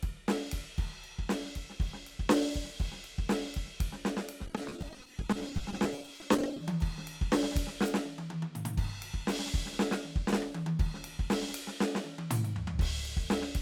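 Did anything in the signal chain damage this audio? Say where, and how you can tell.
Yes. Repeated packet loss (robotic sound), 4.46 to 6.61 s, occurs at the network stage. Dozens of gaps up to 20 ms are patched by extending the preceding music, leaving it choppy with pieces missing.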